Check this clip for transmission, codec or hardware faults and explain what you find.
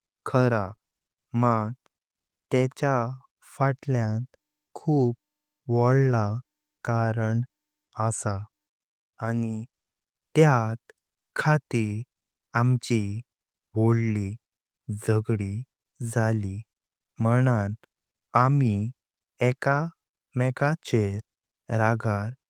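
Transmission faults show up in four places, all from packet loss. Three stretches were rebuilt from error correction and one short gap was concealed.

Lost packets rebuilt from error correction appear at 0.59–0.73 s, 6.03–6.13 s and 19.71–19.77 s, lasting about 80, 60 and 40 ms. Each loss was covered by the low-bitrate backup copy carried in the following packet, so there's no gap, but the speech turns rougher and grainier there.

Short concealed packet loss happens right after the first patch, at 0.75–0.79 s, where about 20 ms never arrived. The decoder stretched the preceding sound to fill the hole and blended back in, which comes across as a quick smear or wobble.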